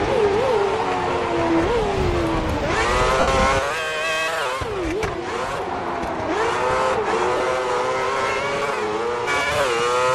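At 3.20 s, lost LE Audio frames break the sound for about 75 ms, which fits roughly ten missing frames. The LC3 decoder fills the gap by repeating the last spectrum with random signs and fading it as the loss goes on. Tonal parts become a brief noisy smear that sinks away. At 7.37 s a shorter 30 ms loss does the same, heard as a quick hiss-like blur. The light lossy compression leaves only faint traces.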